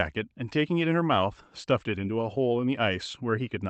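No technical faults are audible.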